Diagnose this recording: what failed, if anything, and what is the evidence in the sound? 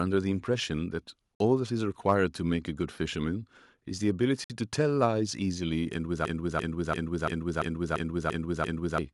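Two short dropouts to silence, 1.35–1.40 s and 4.44–4.50 s, of 51 and 56 ms, then speech resumes. That's likely a Bluetooth stall, with the wireless buffer running dry.

From 6.25 to 8.98 s a 341 ms chunk repeats eight times, a 2.9 Hz loop: a system hang loop at the driver or buffer stage, fitting an 8192-sample ring buffer.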